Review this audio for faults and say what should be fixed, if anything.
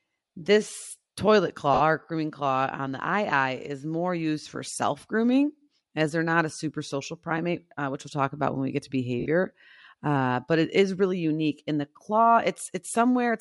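The speech has a grainy, breathy edge on the upper frequencies the whole way through, which is likely Bluetooth LC3 compression. The encoder drops much of the top band and fills it with noise, consistent with roughly 48 kbps in 10 ms frames. Give the link a higher LC3 bitrate so the top end is coded properly.

At 1.74 to 1.81 s and again at 9.20 to 9.26 s there are 60 ms noisy smears. These are lost LE Audio frames, about six 10 ms frames each time, which the decoder patched by repeating the last spectrum with scrambled phase. Improve the radio link or add retransmission headroom so frames arrive in time.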